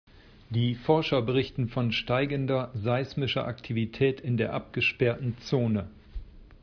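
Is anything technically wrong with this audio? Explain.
No, nothing in this speech recording stood out as a technical problem on listening.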